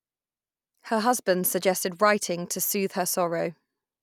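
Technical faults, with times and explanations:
No technical faults can be heard, so there are no times or explanations to give.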